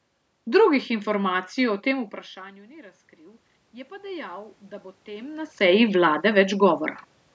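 A slow swell runs through this speech recording starting just after "informacij o" at 1.91 s. Voice and room noise rise together over the next few seconds until about 5.62 s, by roughly 9 dB in all. That is automatic gain rising. The talker moved away from the microphone around 2 s, and the input fell by about 24 dB. The automatic gain control heard the quieter signal and ramped its gain up gradually. It only partly made up the loss and lifted the background along with the voice.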